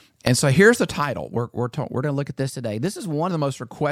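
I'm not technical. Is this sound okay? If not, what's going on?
No. From 2.02 to 3.31 s the speech suddenly runs about 6% fast and sounds roughly a semitone higher, then snaps back. That is a drift correction step, likely software syncing two clocks by briefly speeding playback to keep its buffer balanced.

Inside that stretch, from 2.50 to 2.53 s, there is a short chirp or blip. That is damaged data in a compressed stream: a bit of the file was corrupted, so the player garbled it and jumped to the next readable piece.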